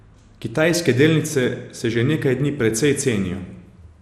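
Throughout the speech, likely MP2 compression at a low bitrate, near 80 kbps: dull, gurgling, granular sound, and a spectrogram shows upper bands flickering, with nothing above 15 kHz.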